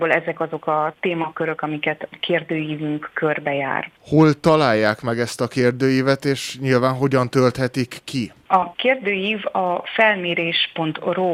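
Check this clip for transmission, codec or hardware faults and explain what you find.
Nothing wrong can be heard anywhere in this recording.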